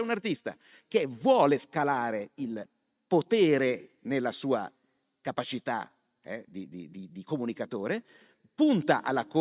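No technical faults can be heard anywhere in the speech recording. There is nothing at any point that calls for a timestamp or further comment.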